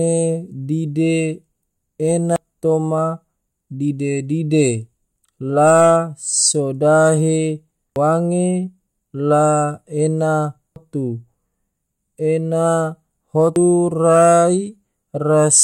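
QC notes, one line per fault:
2.36 s, 7.96 s, 10.76 s, 13.56 s: audio missing between chunks. The likely cause is the recorder or processor dropping a piece while handing over from one roughly 3-second block to the next, so about a fifth of a second of speech vanishes and the two sides butt together as an abrupt skip.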